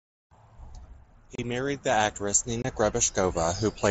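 At 1.35 to 1.39 s and 2.62 to 2.65 s, unconcealed Bluetooth headset packet loss punches holes in the speech. Lost mSBC packets became silence or an idle pattern, leaving abrupt gaps of 30 ms and 22.5 ms.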